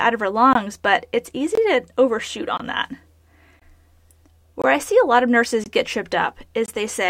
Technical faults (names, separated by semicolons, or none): gap between chunks